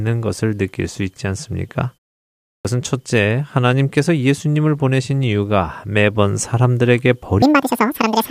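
At 2.51 s the output device, having gone idle during a 0.61 s pause, wakes too slowly, producing a clipped start after a pause: about 0.14 s of the returning speech is swallowed, so it begins abruptly. From 7.42 s to the end, likely a section at the wrong speed fitted to the wrong clock, the speech plays at twice its recorded speed, about 10 semitones higher and noticeably hurried.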